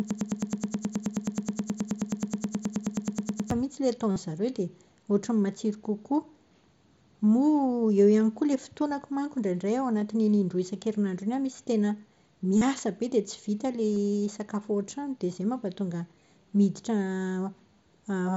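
From the start of the clip to 3.51 s, a broken-record loop is already under way: a 106 ms fragment of speech repeats exactly, back to back, about 32 times. The likely cause is a stalled player or stream resending its last buffered piece, so the intended audio for that stretch is lost.

Concealed Bluetooth headset packet loss follows at 4.12 s (45 ms), 12.58 s (37.5 ms) and 13.94 s (22.5 ms). Lost headset packets were filled by repeating the best-matching recent waveform, heard as a brief held buzzy tone with a slight warble as the real speech resumes through the mSBC link.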